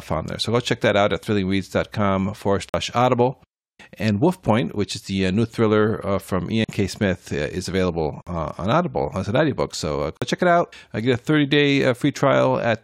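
In this speech clip, the sound drops out into dead silence four times, each a roughly 46 ms hole: at 2.69 s, at 6.64 s after "new thriller uh from", at 8.22 s between "uh is available" and "uh on", and at 10.17 s just before "check it out I". These are blocks of digital silence, where identical-length chunks of samples were replaced by zeros, which fits a 2048-sample output buffer not being filled in time.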